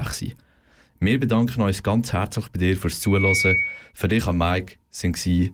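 From 3.02 to 3.93 s, after "herzlich bei dir fürs", a 2.2 kHz tone swells over the speech: loudspeaker feedback squeal, the microphone re-amplifying its own loudspeaker.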